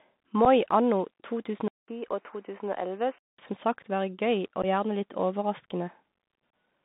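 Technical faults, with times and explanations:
Throughout: Bluetooth CVSD headset codec. The sound is confined to roughly 150 Hz to 3.7 kHz and carries plainly audible damage: a granular hiss, scratchy sibilants and gritty distortion on loud high content. A one-bit adaptive step coder cannot track fast rises, which fits a 64 kbps CVSD link.
0.45, 2.08 to 2.12, 4.62 to 4.65 and 6.50 to 6.53: unconcealed Bluetooth headset packet loss. Short holes with abrupt edges open of about 7.5, 18.8, 15 and 26.2 ms. The one near 2.1 s is scattered over 37.5 ms, so it sounds chopped. Lost voice packets were replaced by silence rather than patched over.
1.68 to 3.39: input switched to a poorer device. After a 200 ms silence the sound turns dull, with nothing above 3.1 kHz and fresh background noise about 40 dB below the signal, though the level stays roughly the same. This is likely a change to another microphone or a headset call profile.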